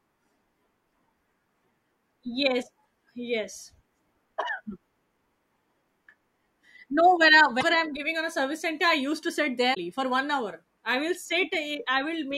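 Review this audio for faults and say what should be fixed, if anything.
Two short bursts of damaged data in a compressed stream break the speech, at 7.57 to 7.64 s, right after "when I", and at 9.71 to 9.77 s, after "I used to sit". Each lasts about 64 ms: corrupted bytes make the decoder misread frames, lose sync and hunt for the next header. A spectrogram shows a sharp broadband smear; the waveform, an abrupt discontinuity. Verify stream integrity with checksums and retransmit or re-encode damaged segments.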